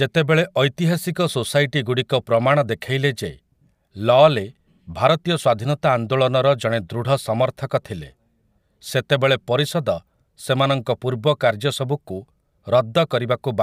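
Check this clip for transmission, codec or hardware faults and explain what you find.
Nothing turned up on this one: I listened through the whole speech recording and didn't catch anything that sounds like a fault.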